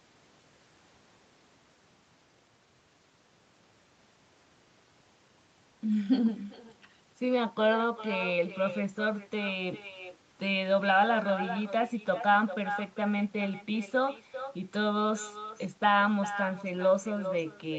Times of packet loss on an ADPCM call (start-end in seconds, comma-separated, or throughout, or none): none